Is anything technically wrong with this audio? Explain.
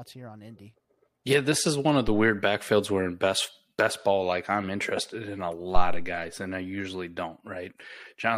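Yes, there are two phantom power thumps. At 2.08 to 2.35 s and again at 5.76 to 6.17 s, a supply on the live microphone input is switched. The sudden DC step passes through the coupling capacitors as a low-frequency pulse. Each is heard as a deep thump over the speech. The first peaks at about -19 dBFS and decays in 62 ms. The second is louder, peaking at about -9 dBFS, with a 91 ms decay.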